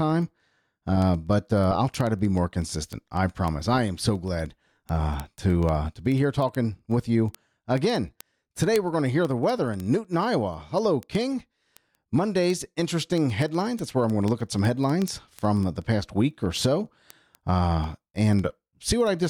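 This is a speech clip with a steady train of sharp ticks of uneven strength running almost its whole length, from 0.10 s to 19.25 s. They arrive at a regular rate of about one every 0.07 s, roughly fourteen a second and some three hundred in all. These are word clock ticks. The receiving device runs on its own clock, not locked to the sender's digital link. The mismatch, on the order of a few hundred parts per million, means each time the clocks slip past each other a single sample is dropped or repeated, leaving a tiny discontinuity.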